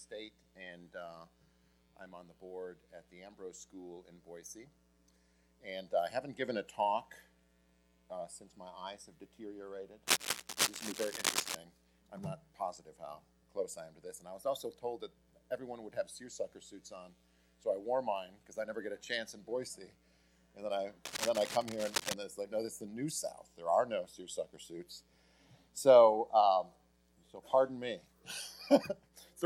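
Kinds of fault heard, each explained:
cable scratch noise: A worn cable, connector or control was likely moved, its contact resistance fluctuating fast and injecting dense, uneven noise bursts. The result is a scratching rustle from 10.07 to 11.56 s, about as loud as the sound, and from 21.05 to 22.14 s, somewhat quieter.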